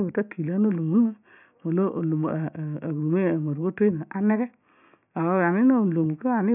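A short speech recording with no technical faults to point out. Nothing in it calls for a time, a cause or a fix.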